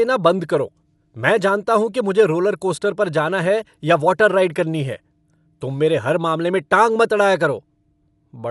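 From start to finish the speech is dull and band-limited, with nothing above 11.5 kHz, and a rough, fluttering noise clings to voiced sounds. This points to likely Dolby Digital compression at a starved bitrate, which fits about 64 kbps. Short of bits, the encoder narrowed the band and left many frequency lines without mantissa data, so the decoder filled those gaps with dither noise. The damage is plainly audible throughout.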